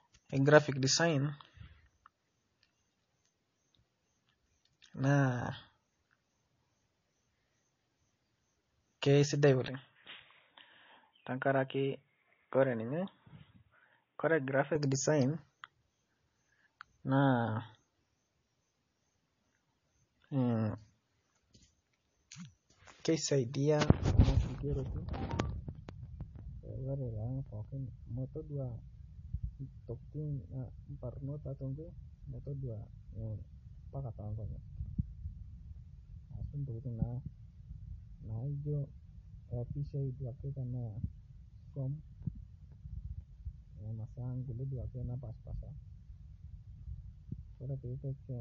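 Throughout the speech, plainly audible watery, swirly artefacts and nothing above 7.2 kHz point to a likely cause of MP3 compression, at a bitrate that fits roughly 32 kbps, zeroing weak frequency lines and cutting the treble. From 9.68 to 14.75 s the speech turns dull and boxy, with nothing above 3.8 kHz, about 5 dB quieter, and new noise roughly 45 dB below the speech, with no silence at either switch. The likely cause is the input switched to a poorer device with a narrower band, before the fuller sound returns.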